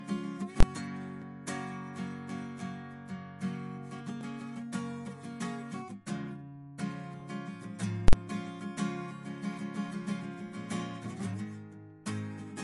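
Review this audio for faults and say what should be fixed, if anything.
The whole clip sounds like low-bitrate audio saved at a high bitrate. Nothing is present above 11.3 kHz, and the music carries the swirly, smeared texture of a heavily squeezed MP3. The likely cause is a 48 kbit/s MP3 that was later re-encoded at 320 kbit/s: the second pass keeps everything the first pass threw away missing. A clean 320 kbit/s encode or a simple low-pass filter would not leave this artefact texture below the cut-off. Prevention: encode from the original source, never from an existing low-bitrate file.

Two events sound like invalid numbers at full scale. From 0.60 to 0.63 s there is a single loud bang, and from 8.08 to 8.13 s there is a longer burst. Their lengths of 23 and 46 ms fit processing blocks of 1024 and 2048 samples. A calculation produced infinite or invalid values, and the output was pinned to one extreme value for the whole block. 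Ordinary clipping squares off peaks while the music continues. Here the music vanishes entirely under the burst. Prevention: check for invalid values in the processing chain and zero any affected block.

Audio missing between chunks shows up at 1.22 s and again at 4.21 s. At each point the music jumps forward by roughly 7 ms with no gap of silence. The 3 s spacing likely comes from the recorder or processor losing a few milliseconds each time it closes one chunk and opens the next. A dropout would leave a silent hole, whereas here the two sides are spliced directly together. Prevention: overlap or double-buffer chunk boundaries so no samples are lost at handover.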